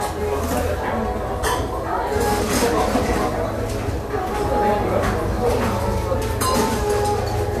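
A recording of everyday sounds with nothing above 14 kHz throughout, despite being a high-rate MP3. The likely cause is low-bitrate audio saved at a high bitrate: an earlier lossy encode, consistent with roughly 64 kbit/s AAC, removed the top band, and re-encoding cannot restore it.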